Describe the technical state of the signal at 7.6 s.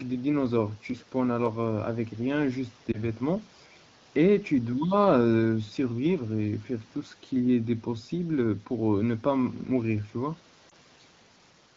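At 7.6 s the speech is intact, with no fault in the signal at that moment beyond the light coding of its AMR wideband (HD Voice) path at 12.65 kbit/s.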